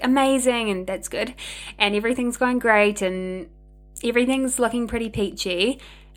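Power-line current is leaking into the signal path, most plausibly through a ground loop or a transformer close to the wiring, and it leaves mains hum at 50 Hz under the speech for the entire clip: a steady low drone, roughly 25 dB below the voice, with some low harmonics.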